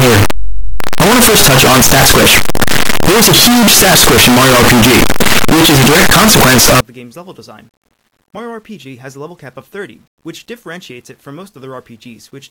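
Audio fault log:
0.0 to 6.8 s, signed and unsigned mixed up: the audio turns into very loud, harsh distortion, and quiet stretches come through as loud as everything else. The likely cause is 8-bit samples read with the wrong sign convention, which flips the top bit so every zero crossing leaps across the full range. After 6.8 s this stops.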